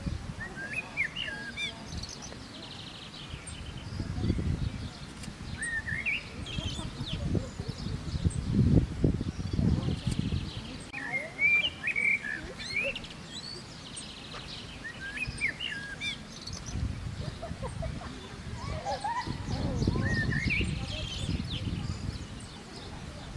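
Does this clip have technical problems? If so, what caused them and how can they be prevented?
No, this clip has no technical problems, so there is nothing to prevent.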